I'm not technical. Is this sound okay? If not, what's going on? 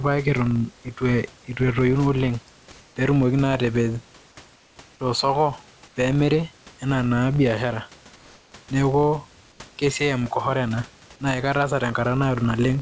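No. A filter restarted on every block, forgetting its state each time, so a buzz of about 43 Hz that rises and falls with the speech runs through the whole speech, which fits 1024-sample blocks.

Comfort noise in place of the background: the sender likely paused during quiet moments, and the receiver filled those gaps with smooth artificial hiss instead of the real room sound. This happens at 2.72 to 2.96 s, just before "pee etumoki naa atapej", at 4.56 to 4.76 s, at 5.88 to 5.96 s, just before "pee emiri", and at 9.52 to 9.60 s, just before "ke siai". In the last three the hiss is slightly quieter.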